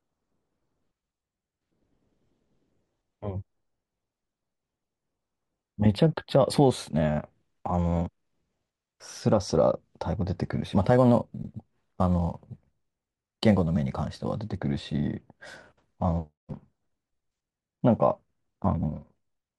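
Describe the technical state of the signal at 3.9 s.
At 3.9 s the speech signal is intact, with no dropout, clipping, distortion or other fault audible.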